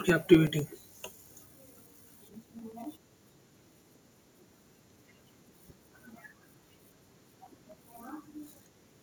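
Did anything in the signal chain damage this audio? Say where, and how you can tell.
Yes. From 0.09 s to 8.97 s the speech carries a steady ticking, one small click every 0.125 s (eight per second), audible only while there is signal. That is periodic USB or driver dropouts at the driver and buffer stage: something blocks the USB transfer or the audio driver on a fixed schedule, and each time roughly a millisecond of samples is lost and filled with silence. Around seventy such gaps recur with clockwork regularity.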